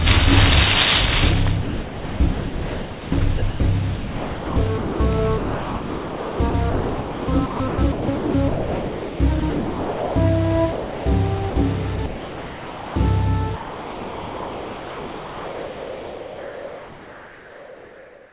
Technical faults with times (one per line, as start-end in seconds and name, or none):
1.62-3.12 sound chopped by the voice detector
3.38-3.60 sound chopped by the voice detector
3.96-5.00 sound chopped by the voice detector
5.38-10.16 sound chopped by the voice detector
10.72-11.06 sound dropped by the voice detector
11.50-11.56 sound dropped by the voice detector
11.96-12.96 sound chopped by the voice detector
13.56-18.32 sound dropped by the voice detector